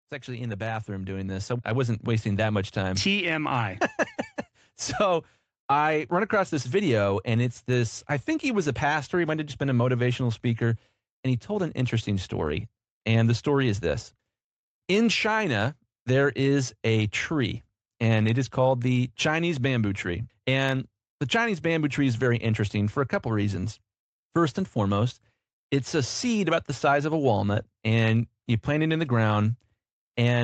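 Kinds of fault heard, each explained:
Automatic gain rising: the speech and background swell together by about 9 dB from 0.25 to 3.86 s, as gain control slowly raises level on quiet input.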